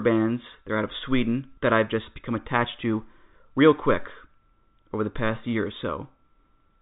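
Listening to the speech in full, nothing stood out as a technical problem, and its telephone-style G.711 sound, with nothing above about 3.8 kHz, is simply how that format carries it.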